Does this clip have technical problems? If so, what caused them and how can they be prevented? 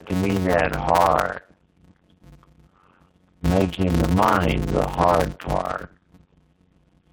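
Yes. Tandem speech coding runs through the whole clip. The sound has been through two narrowband speech codecs in a row, which points to AMR-NB at both ends with G.711 between. Each coder reworks the previous one's artefacts, so the speech turns rough, muffled and warbly. On a spectrogram nothing appears above 4 kHz, and the harmonics look smeared and patchy. Keeping the call in one codec end to end, with transcoder-free operation, avoids this.

A block size mismatch (padded) is also present throughout. Each short block is topped up with zeros before the next stage reads it, which fits 256-sample blocks. The result is a buzz at 91.9 Hz and playback at 0.533 times normal speed, at roughly normal pitch. The waveform shows evenly spaced flat silent gaps, and the spectrogram shows vertical stripes at that rate. Matching the block sizes between stages, or buffering properly instead of padding, prevents it.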